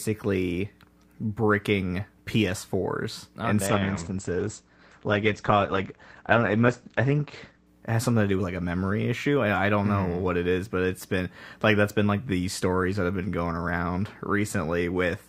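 From 3.67 to 7.67 s, after "oh in damn", an adaptive stream at a lower bitrate strips content above 8.5 kHz: a sudden flat spectrogram ceiling, with rising codec artefacts.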